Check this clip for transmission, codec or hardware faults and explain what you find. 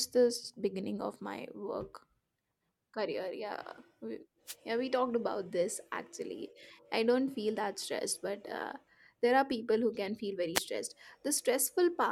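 Two wireless microphone noise hits occur, at 4.46–4.55 s and 10.55–10.60 s. Each is a brief swish of static as the FM radio link fades and receiver noise floods in, seen as a broadband vertical smear on a spectrogram and a dense burst on the waveform.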